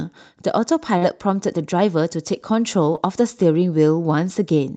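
At about 0.97 to 1.03 s there's a short concealed packet loss. Roughly 40 ms of the speech never arrived in time, so the receiver kept the last sound going, voiced or noisy, and faded back into the real audio. You hear a quick smear or wobble. A second, shorter one at 2.95 to 2.99 s covers about 20 ms and comes across as a brief smear. Both sit inside an Opus call path whose top end stops around 8 kHz.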